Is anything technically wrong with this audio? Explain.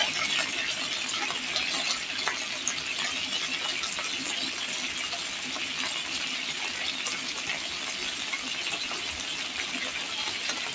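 No, nothing is technically wrong with this audio.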